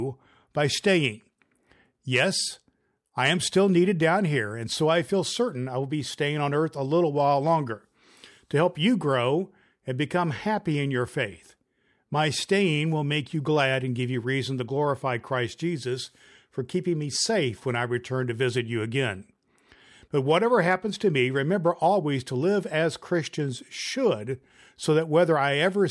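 No technical faults are audible.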